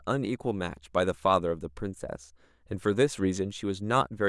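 No audible technical fault turns up anywhere in this speech recording.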